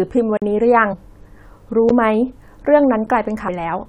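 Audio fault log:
0.37–0.42 s, 1.89 s, 3.07 s: block of digital silence. The speech drops to silence and returns with no fade. The first gap lasts about 46 ms and is heard as a short hole. It fits a 2048-sample buffer. The later two last about 12 ms each and land as ticks. They fit a 512-sample buffer. The output buffer was likely not filled in time, so zeros went out instead.
0.92–0.94 s, 3.47 s: damaged data in a compressed stream. Here the compressed data is corrupt. The decoder misreads the bad frames and loses its place. It then hunts for the next valid frame header. This gives a brief chirp or squawk where the speech should continue. The first event spans about 22 ms. The second is a shorter blip of about 14 ms.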